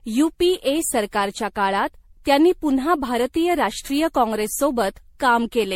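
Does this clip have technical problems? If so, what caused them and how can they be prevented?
Yes, generation loss runs throughout this speech: swirly, hollow and smeared, nothing above 16.5 kHz. Likely cause is around ten MP3 re-encodes, consistent with 64 kbit/s. Prevent it by editing from a lossless master and encoding once.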